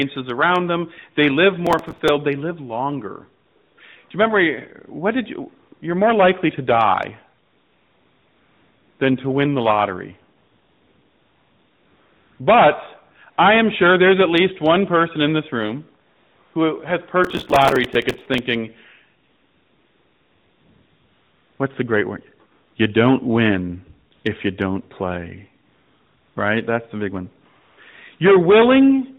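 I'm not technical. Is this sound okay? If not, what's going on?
No. There are two problems.

From 1.67 to 2.09 s and again from 17.24 to 18.38 s there is processor overload crackle. The computer fell behind and kept repeating tiny slices of old audio, which causes gritty tearing over the speech.

There is also AMR comfort noise, the phone-call trick of filling pauses with fake, smooth hiss. It happens at 3.46 to 3.78 s (right after "live longer"), 7.46 to 9.00 s, 10.38 to 12.40 s, 16.08 to 16.54 s, 22.52 to 22.76 s, 24.14 to 24.24 s (between "don't win" and "if you don't play"), 25.66 to 26.36 s (after "if you don't play") and 27.62 to 27.78 s. Unlike the crackle, it's steady and switches in and out only during pauses.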